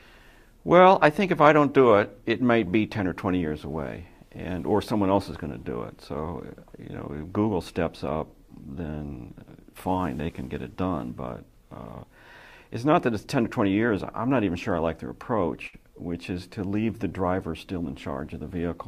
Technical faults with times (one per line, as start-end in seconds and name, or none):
15.67-15.75 burst of packet loss